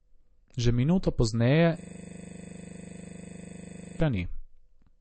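From the start, the speech has nothing above 8.3 kHz. It sounds dull. This is likely low-bitrate audio saved at a high bitrate: an earlier low-bitrate MP3 pass stripped the top end, and re-encoding at a high bitrate could not restore it.

At 1.81 s, just after "minuto pozneje", a system hang loop begins. The system froze, and the sound hardware kept replaying one 40 ms buffer. That slice repeats around 55 times, until 4.0 s. It produces a rough, mechanical buzz at 25 Hz.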